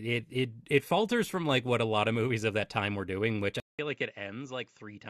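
Speech clip where, at 3.6 s, a gap of about 0.19 s is followed by duller, slightly quieter sound with nothing above 7.6 kHz and a faint new noise floor, likely an input switched to a poorer device.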